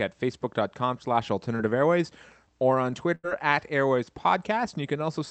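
A speech recording carried over a call link, with the top end stopping around 8 kHz as a wideband Opus stream would, shows two dropouts. At 1.55 to 1.61 s there is a brief smear where the sound wobbles for an instant. This is short concealed packet loss: about 40 ms of audio never arrived, and the receiver bridged the hole with roughly 35 ms of synthesised continuation of the preceding sound before blending back. At 3.15 to 3.25 s the sound is drawn out and fades, and then picks up further along with a piece gone. That is a burst of packet loss: around 80 ms of consecutive audio was lost, and about 85 ms of extrapolated, decaying fill covered the gap before real audio resumed.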